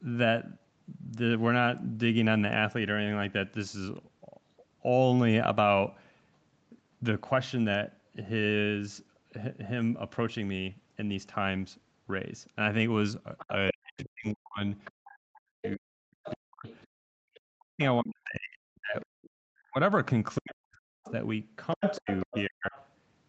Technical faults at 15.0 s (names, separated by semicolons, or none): other side's voice leaking through; speech suppressed in double talk; background gated by the echo canceller